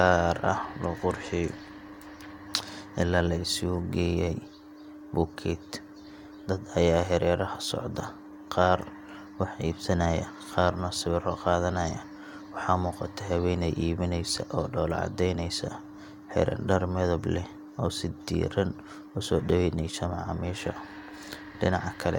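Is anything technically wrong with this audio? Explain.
No, nothing in this speech recording points to a technical fault.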